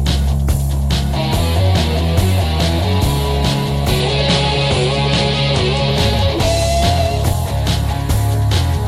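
From 4.00 to 5.90 s the sound turns duller, with nothing above 10.5 kHz, no gap and no level jump, likely an input switched to a poorer device.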